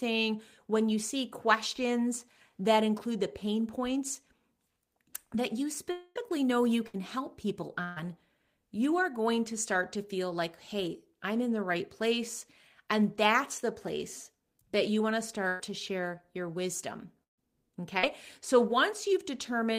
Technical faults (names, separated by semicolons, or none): long network dropout; burst of packet loss; short concealed packet loss